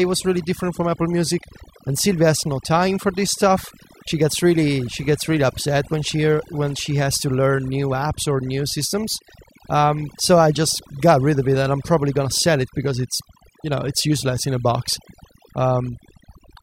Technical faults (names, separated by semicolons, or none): overdone noise removal